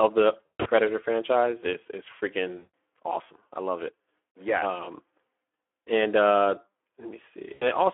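From start to finish the speech carries Speex codec damage at 11 kbps, plainly hoarse and noisy, with the spectrogram showing energy only between 300 Hz and 3.4 kHz.

At 0.46 to 0.68 s, just before "franchise is is", VoIP packet loss concealed by the speech codec sets in. About 180 ms goes missing in scattered gaps over 200 ms, the longest run 140 ms. It sounds like a stretched, fading smear.

At 2.57 to 2.74 s, between "franchise is is" and "awesome I love it", about 160 ms is concealed the same way. The waveform envelope decays smoothly here.

At 7.54 to 7.69 s, an 80 ms loss briefly stretches the sound as it fades.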